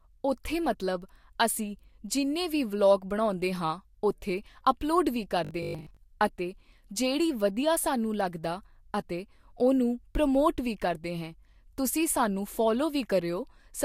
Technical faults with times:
5.45-5.99 robotic sound from repeated short buffers

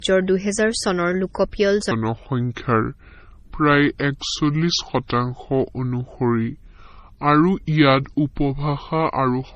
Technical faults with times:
0.00-9.55 transcoding between lossy codecs
1.91-9.55 section at the wrong speed

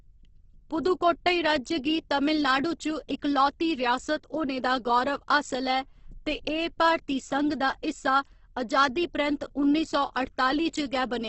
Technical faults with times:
0.00-11.28 Opus compression

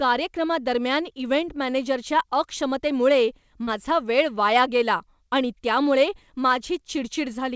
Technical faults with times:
3.64-3.69 short concealed packet loss

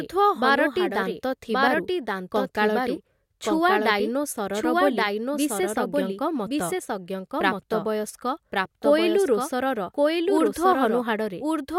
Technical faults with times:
0.00-11.79 doubled audio track

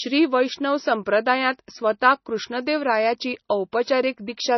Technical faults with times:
0.00-4.57 MP3 compression

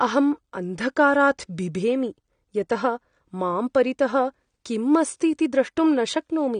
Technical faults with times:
0.00-6.59 AAC compression

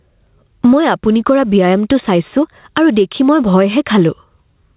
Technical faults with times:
0.00-4.76 gain pumping

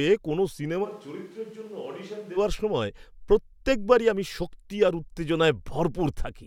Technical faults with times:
0.86-2.36 switch to a distant microphone

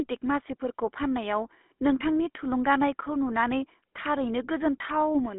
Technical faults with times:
0.00-5.38 GSM full-rate codec

